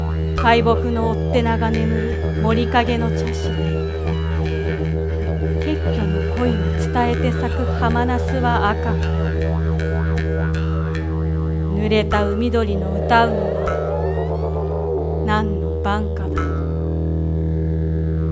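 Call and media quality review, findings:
No faults found.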